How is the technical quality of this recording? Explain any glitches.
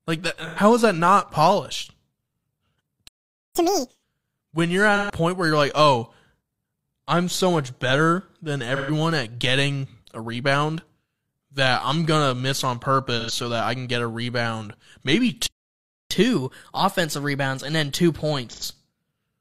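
The quality is poor. The speech suffers repeated dropouts, two silent stalls and sped-up stretches.

AAC frame loss with concealment occurs at 0.48, 4.96, 8.76, 13.19 and 18.49 s. Each gap of about 85 to 128 ms, which fits two or three lost frames, is filled from earlier spectrum. These patches sound smeared and noisy. The one at 4.96 s falls between "when you're" and "where you're like".

Two playback stalls occur, at 3.08 to 3.55 s and after "get a rebound maybe" at 15.46 to 16.11 s. The sound halts abruptly, for about half a second and then about 0.6 s, likely because the player ran dry.

Catch-up at higher speed follows each stall. From 3.55 to 4.03 s, up to "when you're", playback runs at double speed and about 10 semitones high. From 16.11 to 19.11 s it runs 1.1 times fast, slightly sharp.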